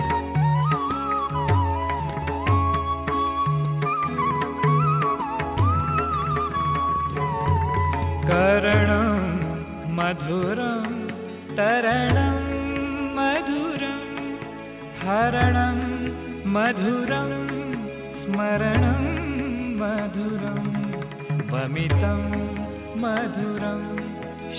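No technical fault can be heard anywhere in the audio. There is nothing here that calls for a time or a cause to be given.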